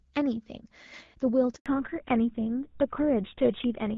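A handover gap at 1.56 to 1.66 s cuts this speech clip to silence for 100 ms: the voice fades out within a few tens of milliseconds as the call switches networks, and nothing in that stretch survives because no speech frames arrived. A fallback to narrowband follows from 1.66 s to the end. Up to the gap the sound is wideband HD Voice with light coding damage, consistent with AMR-WB at around 12.65 kbit/s. From 1.66 s nothing is left above 4 kHz, and the voice turns duller and rougher, which points to the call dropping to an older codec such as GSM full rate.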